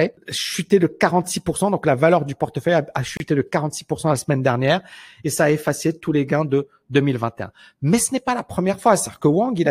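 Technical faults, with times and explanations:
3.17 to 3.20 s, gap at a join of encoded pieces: right after "valeur du portefeuille a", about 30 ms of silence cuts in, from encoder delay and end padding left untrimmed at the splice.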